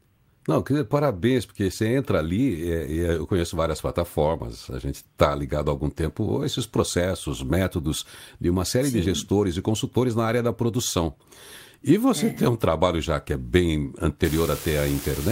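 A marginal data line from 14.25 s to the end at 15.31 s leaves one bit unreliable, flipping at random in a share of samples. Each flip adds a spike of the same size, about -22 dBFS, so the speech picks up a steady crackling fizz that persists through pauses.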